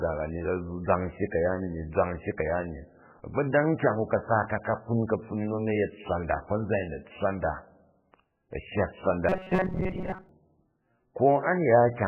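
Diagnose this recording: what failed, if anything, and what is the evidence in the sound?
MP3 compression, throughout the clip, at the codec stage. The damage is heavy: weak frequency lines drop in and out between frames, giving a watery, swirling texture and smeared consonant onsets. The likely cause is a very low-bitrate MP3 encode, around 8 kbps, which starved the signal of bits.

Robotic sound from repeated short buffers, from 9.29 to 10.29 s, at the driver or buffer stage. For that second the speech becomes a rigid metallic buzz at 188 Hz that only loosely follows the speech contour. When fresh audio arrives too late, a block of about 5.3 ms is replayed over and over. That repetition imposes a fixed pitch of one over the block length. Most of this stretch is repeated material, and the skipped real audio is lost. The likely cause is buffer underruns.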